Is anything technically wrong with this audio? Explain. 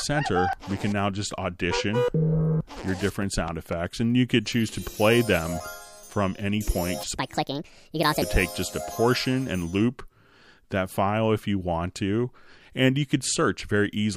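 Yes. From 7.14 to 8.22 s there is a section at the wrong speed: the audio runs about 1.59 times too fast, likely from being played or resampled against the wrong clock, so it sounds hurried and pitched up by roughly seven semitones.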